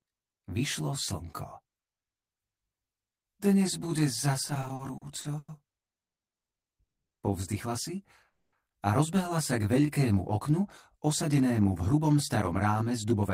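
Channel delay (comb filtering) runs through the whole clip. One channel trails the other by around 20 ms, and when the two are summed to mono the shared content cancels at evenly spaced frequencies from roughly 30 Hz upward, leaving the audio rough or slightly doubled. Repeated stalls (stutter) appear between 4.47 and 5.50 s. The receiver's jitter buffer ran dry eight times, the longest wait 100 ms, and each gap was bridged by extending the last sound. That adds 250 ms of concealment, about 24% of that stretch, so nothing is lost but the audio drags and hiccups. A call audio freeze follows at 8.29 to 8.55 s, where the sound stretches into a fading continuation and then about 150 ms of silence before resuming exactly where it stopped. That inserts a 240 ms gap and adds the same amount of delay, most likely because packets were held up in transit and the buffer emptied. Jitter buffer slow-down runs from 9.65 to 10.00 s. 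Single pitch periods are repeated to rebuild the buffer reserve, adding 52 ms, so the audio plays at about 88% speed with unchanged pitch and a drawn-out feel. Jitter buffer speed-up runs from 11.53 to 13.30 s. Short pitch-period slices are cut to shed excess delay, removing about 200 ms, so the audio plays at about 110% speed, same pitch, sounding hurried.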